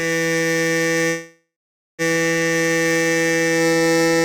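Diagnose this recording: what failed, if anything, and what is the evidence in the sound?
The music trails into a fading buzz and silence from 1.09 to 2.02 s, then resumes where it stopped: a call audio freeze, likely delayed network packets emptying the jitter buffer.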